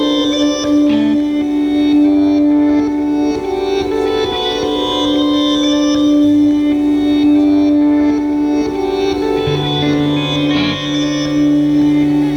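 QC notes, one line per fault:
No faults found. Nothing in the audio calls for a QC note.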